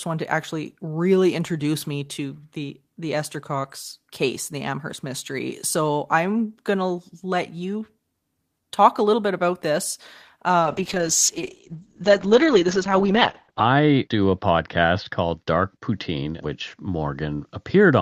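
From 10.6 s onward, a call bitrate drop leaves the speech coarse and muffled, cut off at 8 kHz, which fits about 8 kbps. Unlike packet loss, nothing drops out.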